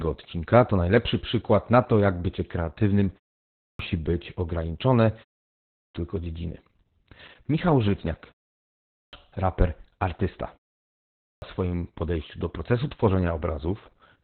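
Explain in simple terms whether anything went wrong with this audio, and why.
The whole recording went through heavy Opus voice compression at a very low data rate. Nothing above about 4.3 kHz survives, so the speech sounds muffled, hoarse and slightly robotic, like a poor phone line where the crisp upper detail has been cut away.

There are also four clipped starts after a pause, at 3.43, 5.51, 8.72 and 11.06 s. Each time the playback device had dozed off during a brief silence and took roughly 0.36 to 0.44 s to wake, so the opening of the next phrase is missing.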